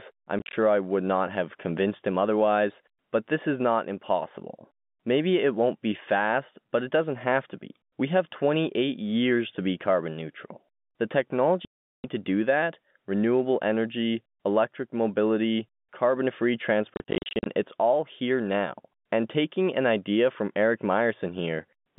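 Speech chopped by hard-edged silent holes, from packet loss filled with silence over a telephone-band G.711 line: scattered gaps at 0.39–0.53 s before "I would not have", a solid 390 ms dropout at 11.65–12.04 s before "to do that renewable", and broken gaps at 16.95–17.46 s between "electric mobility carbon free" and "it's all here now", which fits 10 ms packets.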